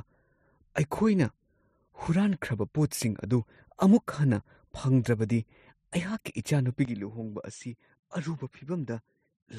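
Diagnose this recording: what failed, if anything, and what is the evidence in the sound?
From 6.85 s the speech dulls and drops slightly, losing everything above 9 kHz, with faint new background noise: input likely switched to a poorer device.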